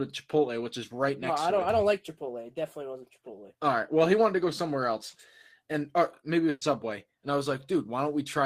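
At 6.49 s the last sound is stretched and fades for about 120 ms, then resumes later: a burst of packet loss, concealed by extending the sound, with 120 ms missing.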